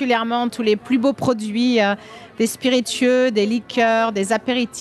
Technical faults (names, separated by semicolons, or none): none